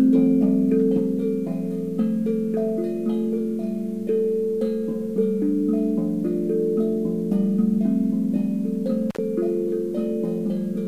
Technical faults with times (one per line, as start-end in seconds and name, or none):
9.10-9.18 intermittent contact